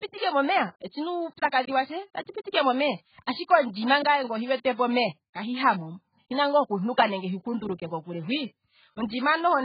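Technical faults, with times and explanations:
Throughout, AAC compression: the speech was likely pushed through AAC-LC at a very low bitrate, which fits roughly 12 kbps, so the encoder cuts everything above 4.8 kHz and coarsely quantises the rest, leaving heavily dulled, smeared speech with warbling, fizzy sibilants.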